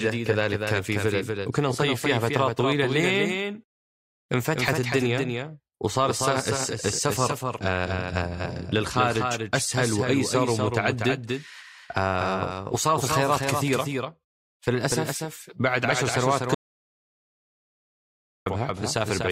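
Throughout, the speech carries a doubled audio track. A second copy trails about a fifth of a second behind, a few dB quieter, likely from a duplicated capture path. From 16.55 s to 18.46 s there is an audio dropout to silence. Nearly two seconds cut to silence, likely a lost input, and the speech there is gone.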